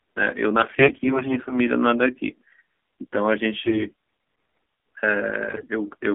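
Throughout, the speech carries the AMR narrowband mobile codec: a 250 Hz to 3.5 kHz band with a buzzy, synthetic edge, which fits a low 7.4 kbps mode, unlike plain band-limiting. From 0.60 to 1.55 s, AMR bit errors misplace excitation pulses, making the voice hoarse and gargly while pitch and level hold, unlike dropouts or concealment gaps.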